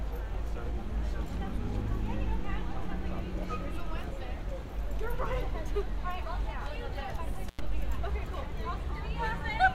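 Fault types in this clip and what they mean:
intermittent contact: Around 7.48 s the sound drops out abruptly for about 95 ms, with crackle at both edges of the gap and faint hiss in between, the signature of a loose cable or plug briefly opening the connection before it closes again.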